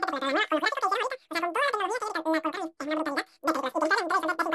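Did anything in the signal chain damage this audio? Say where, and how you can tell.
Yes: speech is squeaky and rushed throughout, 2.76 times fast, 17.6 semitones up. Wrong sample rate at playback, consistent with 16 kHz audio played at 44.1 kHz.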